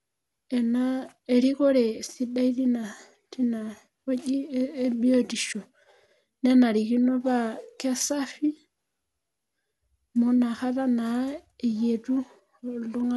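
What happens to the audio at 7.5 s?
At 7.5 s, as throughout, the speech has generation loss. Repeated re-encoding, likely about three MP2 passes near 96 kbit/s, stacks noise. It sounds swirly and hollow, with nothing above 11.9 kHz.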